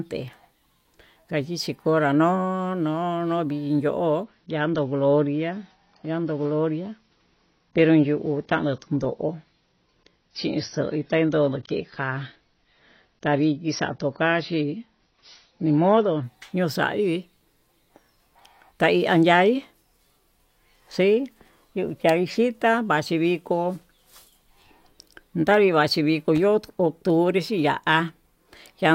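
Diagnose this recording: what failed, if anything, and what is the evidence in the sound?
The adaptive stream dropped to a lower bitrate, a network-side problem showing up through the codec. From 4.23 s to 16.23 s the speech suddenly loses its top end, with nothing above 6.6 kHz, and the codec artefacts thicken, then it snaps back with no gap at either edge. That twelve-second stretch sounds like the player switched to a much leaner rendition of the same AAC stream while the connection sagged, roughly a quarter of the normal rate.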